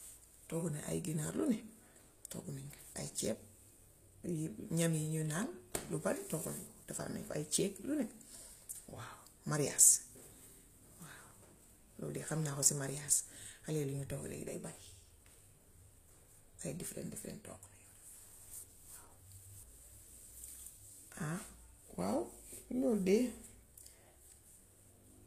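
Throughout, sibilants sound gritty and metallic, likely from HE-AAC compression at a low bitrate near 24 kbps; spectrograms show copied-looking treble bands and nothing above 14.9 kHz.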